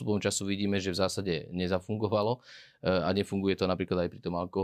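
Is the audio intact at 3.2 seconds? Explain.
Yes, at 3.2 seconds the speech plays through cleanly, with no dropout, click, distortion or other fault to be heard at that moment.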